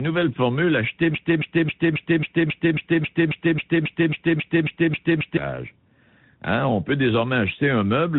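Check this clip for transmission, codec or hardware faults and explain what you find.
Two faults are audible in this speech clip.

Tandem speech coding runs throughout. Two speech codecs in a row, likely AMR-NB then G.726, each degrade the last's output, leaving rougher, warblier sound than any single codec, with nothing above 3.8 kHz.

A broken-record loop runs from 1.15 to 5.37 s. One 271 ms fragment repeats exactly 16 times, likely from a stalled stream, and the intervening audio is lost. Packet-loss stutter would not repeat identically.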